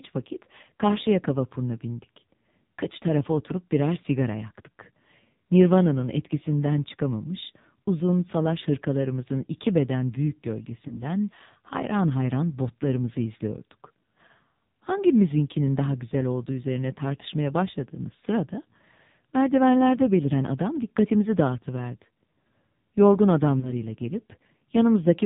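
Throughout, the speech sounds buzzy, synthetic and muffled, with nothing above 4 kHz. This is heavy damage from the AMR narrowband mobile codec, which fits a low rate of around 5.9 kbps.

From 10.88 to 11.02 s, just after "hırkalarımızın iki beden büyük", there is a brief dip or warble. A single 20 ms lost AMR speech frame was patched by the decoder from the previous frame's pitch and vocal-tract settings. The same short glitch recurs from 23.60 to 23.72 s, from another single lost frame.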